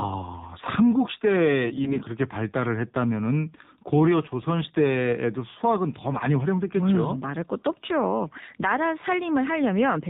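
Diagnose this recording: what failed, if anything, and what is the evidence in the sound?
Codec stage: the AMR narrowband mobile codec runs throughout. The spectrogram shows a hard ceiling at 4 kHz, and the voice is plainly buzzy and synthetic, which fits the 7.4 kbps mode.

Network stage: AMR bit errors from 1.64 to 2.05 s, spanning about 20 frames. Flipped bits misplace the excitation pulses, making the voice hoarse and gargly, with smeared harmonics on the spectrogram.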